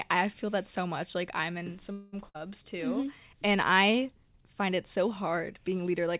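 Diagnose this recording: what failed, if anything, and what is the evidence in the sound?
Call audio freeze, 1.92 to 2.15 s, network and jitter buffer: a fading continuation of the last sound fills 205 ms, then speech resumes intact, likely because delayed packets emptied the buffer.

Burst of packet loss, 2.29 to 2.48 s, network stage: 58 ms of decaying held sound covers 60 ms of lost speech, which then resumes further on.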